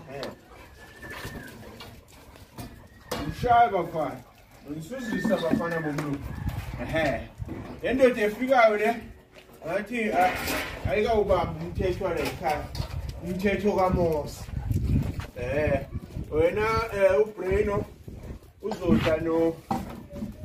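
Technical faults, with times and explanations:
Nothing stood out as a technical problem on listening.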